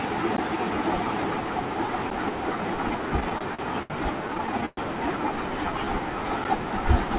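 Speech carried over a narrowband call path whose spectrogram goes empty above 4 kHz, which fits a G.711-style codec at 64 kbps. It has two short blocks of digital silence, at 0.37 s (about 13 ms) and 2.10 s (10 ms), where the sound cuts out abruptly and returns with no fade. Each is heard as a tick, shows as a flat line on the waveform, and appears as a thin vertical broadband stripe on the spectrogram. The likely cause is output buffers not being filled in time. There are also repeated stalls (stutter) from 3.20 to 3.92 s (five gaps, 158 ms concealed, longest 73 ms) and from 4.28 to 4.79 s (seven gaps, 173 ms concealed, longest 116 ms). Late packets emptied the jitter buffer, and the receiver stretched the last sound to fill the gaps. Nothing is lost, but the speech drags, and the spectrogram shows smeared, repeated frames with faded stretches.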